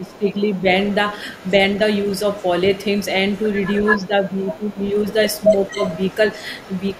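From 0.0 to 0.65 s the speech dips in patches by up to about 15 dB, and again from 3.96 to 4.87 s and 5.49 to 5.79 s by about 10 dB. This is speech suppressed in double talk, likely an echo canceller turning down the near talker while the far side speaks. A faint copy trails the voice by 277 ms from 0.06 to 4.07 s, then by 220 ms from 4.39 s to the end, about 20 dB below the speech. This is echo leak, likely loudspeaker pickup that the canceller failed to remove.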